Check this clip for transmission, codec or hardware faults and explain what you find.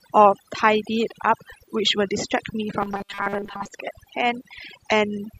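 Two faults here: noise removal that's been pushed too hard across the whole clip, and a stretch of robotic buzzing in the middle of the speech.

The overdone noise removal runs from start to finish. The background drops and breaks up into little twinkling specks. That happens because individual frequency bands near the noise estimate get pulled way down, taking quiet speech detail with them.

From 2.80 to 3.71 s the speech turns into a rigid metallic buzz at 200 Hz that still loosely tracks the talking. The likely cause is robotic sound from repeated short buffers, with most of the real audio skipped. A 200 Hz buzz fits a repeating chunk of about 5 ms.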